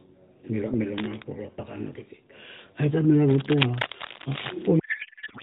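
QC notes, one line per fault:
0.98–1.22 s and 3.19–4.67 s, cable scratch noise: dense, uneven scratchy bursts sit over the speech, the first just before "kurue apakana kiti" at around 10 dB under it, the longer one after "tar mila" and louder, only about 5 dB down. Likely a worn cable or connector being moved, with its contact resistance jumping around.
4.80–5.43 s, codec payload misread: right to the end the speech turns into garbled noise and warble that barely tracks it. It sounds like octet-aligned AMR frames being unpacked as bandwidth-efficient, so the decoder reads its fields from the wrong bit positions and rebuilds nonsense instead of the light AMR-NB coding heard earlier in the clip.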